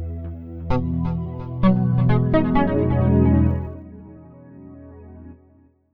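From 3.46 to 3.84 s the level drops by roughly 20 dB in unsmoothed 1 dB steps, around a hundred per second, producing zipper noise: each step leaves a small click, heard as a fine ticking that rides on the sound during the fade.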